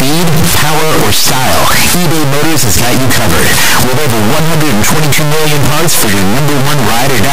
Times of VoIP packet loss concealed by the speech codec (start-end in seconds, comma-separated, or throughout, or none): none